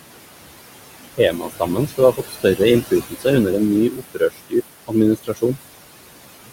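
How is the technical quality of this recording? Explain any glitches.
The recording has two related faults from noise suppression, working against room noise that sits about 11 dB below the speech.

Noise suppressor artifacts run throughout. The suppressor pulls down bands it judges to be steady noise by about 20 dB, frame by frame, so the background dips between phrases and swells under them.

Speech cut by the noise suppressor occurs at 1.17 to 2.0 s, 2.17 to 2.6 s, 3.1 to 3.26 s, 3.9 to 4.54 s just after "en ny", and 5.17 to 5.57 s. The suppressor mistook quieter speech for noise and turned it down, by up to about 22 dB in the fourth stretch, so endings and soft sounds seem swallowed for roughly 150 to 400 milliseconds at a time.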